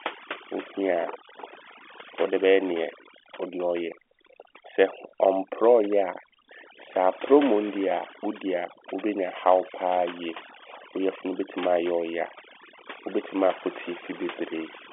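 Throughout, overdone noise removal switches off bands near the noise estimate, so quiet parts of the speech go with them; a spectrogram shows silent gaps speckled with twinkling dots.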